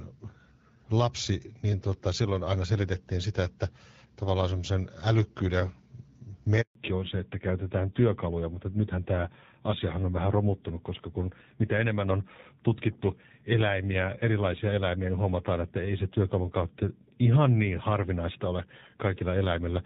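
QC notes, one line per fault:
6.61 to 6.75 s: handover gap, the speech fades within a few tens of milliseconds and stays silent for 140 ms while the call switches networks, unlike a single-packet dropout.
6.75 s to end: fallback to narrowband, everything above 4 kHz disappears for good as the call drops from HD Voice at 12.65 kbit/s to a 7.4 kbit/s narrowband codec.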